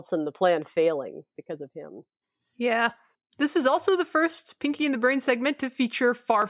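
Nothing in this speech recording stood out as a technical problem on listening.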